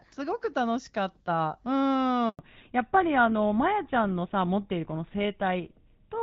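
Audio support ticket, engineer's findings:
Handover gap at 2.29 to 2.39 s: speech dies away and holds silent for 100 ms. Network handover, no speech frames delivered while the link switched; audio in that window lost, not delayed.

Fallback to narrowband from 2.39 s to end: all content above 4 kHz gone, speech duller and rougher. Codec renegotiated down after handover; bandwidth fits GSM full rate. Before the gap, HD Voice wideband audible, consistent with AMR-WB around 12.65 kbit/s, light coding damage only.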